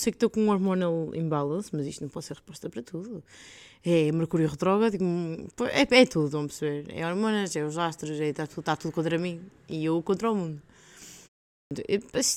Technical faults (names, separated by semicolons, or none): clipped start after a pause